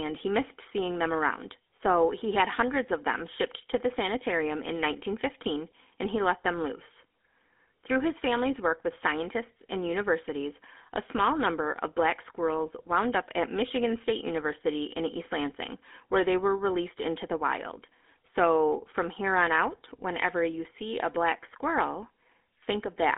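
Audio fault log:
throughout GSM full-rate codec: speech held to a 250 Hz to 3.5 kHz band, nothing above 3.7 kHz, with buzzy, gravelly pulse-driven roughness that plain telephone band-limiting lacks.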